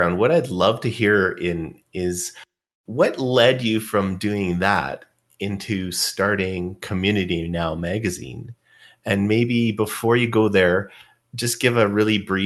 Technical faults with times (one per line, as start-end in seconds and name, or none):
none